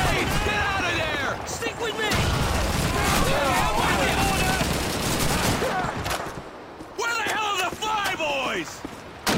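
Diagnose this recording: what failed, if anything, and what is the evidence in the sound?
Nothing failed in this recording, and the sound gives no evidence of any fault.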